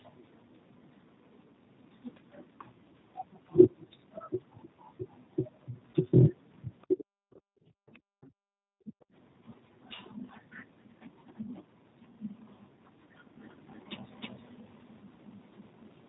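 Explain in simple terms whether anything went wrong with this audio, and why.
Several things went wrong, and one of them lasts the whole clip.

The speech has passed through the G.729 codec, a phone-call codec that squeezes speech hard. Nothing above 4 kHz gets through. So the voice sounds muffled, slightly rough and a bit synthetic from start to finish.

From 5.91 to 5.97 s there is VoIP packet loss concealed by the speech codec. About 30 ms of audio went missing, which fits a single lost packet. The decoder filled the gap by stretching the last sound it had. You hear a brief stretched sound that fades out.

At 8.22 to 8.27 s, something very faint slips in under the speech. This is most likely the other side's voice leaking through. Their voice probably played from a loudspeaker and reached the microphone. The echo canceller did not fully remove it.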